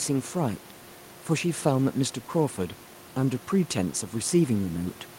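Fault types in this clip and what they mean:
No faults detected; the room's background noise sits about 24 dB below the speech and belongs to the recording, not the system.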